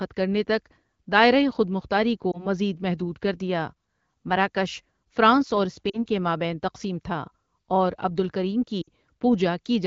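Lost AMR speech frames break the speech three times: 2.32 to 2.47 s, 5.89 to 6.06 s, and 8.82 to 8.89 s. The gaps of about 20, 40 and 60 ms fit one, two and three missing 20 ms frames. The decoder filled each gap by repeating the last good pitch and vocal tract shape at falling gain. The first is heard as a brief smeared warble, and the longer two sag to near silence, before the speech returns rough for a moment. On a spectrogram, harmonics freeze into flat horizontal streaks that fade out, and the wideband band up to 7 kHz dims. The waveform envelope dips at each spot.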